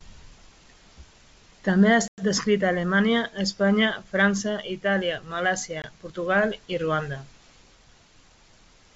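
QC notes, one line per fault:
2.08–2.24 s and 5.82–5.85 s, packet loss on an ADPCM call: about 100 ms (around five packets) then 20 ms (a single packet) went missing and were filled with silence. The hard-edged gaps leave the decoder's predictor and step size out of step, so the sound resumes, at "descrita a" after the first gap, with brief distortion under the otherwise clean 64 kbit/s G.722 band.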